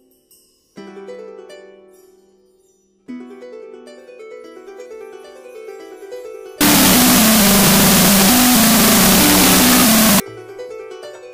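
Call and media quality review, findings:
Wrong sample width, 6.61–10.2 s: loud noise burying the sound at half speed, an octave low. Decoder reading 16-bit samples as unsigned 8-bit, splitting each sample's bytes.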